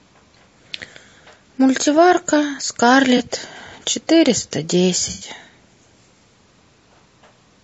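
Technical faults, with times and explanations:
Throughout: low-delay AAC compression, heard as rough, grainy speech with noise between harmonics and a synthetic top band, likely AAC-ELD near 32 kbps rather than broadband hiss.
3.17–3.20 s and 5.11–5.29 s: AAC frame loss with concealment. The decoder refills missing frames from earlier spectrum, giving smeared, phasey patches rather than clean dropouts or clicks.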